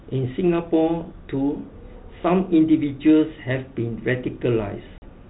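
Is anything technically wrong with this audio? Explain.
Yes. At 4.98 to 5.08 s there is packet loss on an ADPCM call: about 40 ms of audio, roughly two packets, drops out and is filled with silence. This is a G.726 stream at 32 kbit/s, which otherwise passes band-limited telephone sound. Because G.726 codes each sample as a difference from an adaptive prediction, the receiver's predictor and step size lose track of the sender's during the gap. The gap is heard as an abrupt hole, followed by a brief disturbance before decoding settles within some tens of milliseconds. A waveform shows a flat, hard-edged cut; a spectrogram shows a clean vertical blank band.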